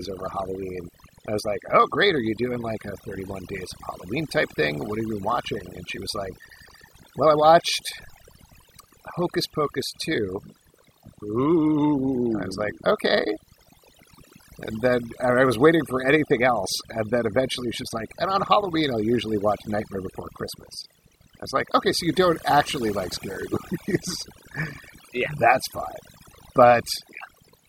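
From start to finish the speech carries overdone noise removal: an over-aggressive denoiser shuts off frequency bands near its noise estimate, taking quiet vocal detail too. Gaps sound near-silent with twinkling specks. A spectrogram shows scattered isolated dots between syllables.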